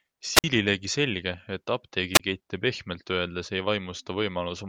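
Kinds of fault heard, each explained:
Wireless microphone squelch dropout: hiss swells as the radio signal fades, then the receiver mutes for 51 and 26 ms, unlike a hissless digital gap.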